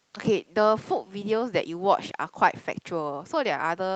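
No technical faults can be heard in this speech, which comes through the call path as that path normally sounds.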